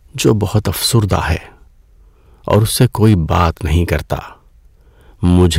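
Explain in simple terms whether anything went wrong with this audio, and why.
Yes, something went wrong. There is hard clipping from 2.5 to 4.1 seconds, and again from 5.25 to 5.47 seconds. The speech got louder than the recording could hold. Its loudest moments were cut off flat, so they sound crackly and harsh.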